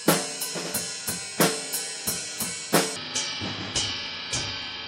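A section at the wrong speed starts at 2.96 s and runs to the end at 4.88 s, likely from playback or editing against the wrong clock. That stretch plays at 0.571 times its recorded speed, so the audio slows sharply and drops about ten semitones in pitch, turning deep and dragged.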